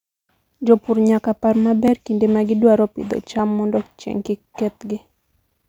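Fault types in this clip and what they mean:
Dropped buffer (overrun): two tiny jumps in the speech, at 1.88 s after "nyaka par" and 3.39 s after "kinde ma gidwaro pidho". Each skips a few milliseconds with no silence, likely because samples went uncollected before the hardware overwrote them.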